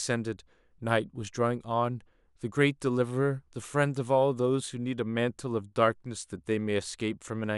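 No technical faults can be heard anywhere in the recording.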